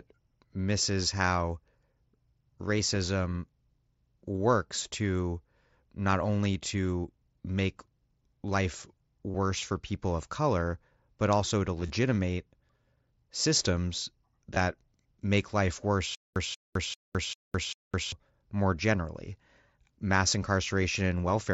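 Three times the link between headset and phone dropped voice packets, and the receiver filled each hole by repeating the best-matching stretch of the last 20 ms or so. This is concealed Bluetooth headset packet loss. From 9.30 to 9.35 s roughly 38 ms is patched, enough to leave a brief buzzy, level-held tone with a small warble as real audio resumes. Between 11.81 and 11.90 s the losses are scattered across 90 ms, the longest run about 23 ms. At 14.55 s a 15 ms patch covers two lost frames inside the mSBC-coded sound.

From 16.15 to 18.12 s the playback likely stalled and retried, replaying its last fragment each time before running dry. This is a stutter with silent gaps. A 185 ms burst repeats five times at a steady 395 ms pace, each separated by about 209 ms of dead digital silence. Whatever should have played during that stretch is gone, so the sound resumes afterward with content missing.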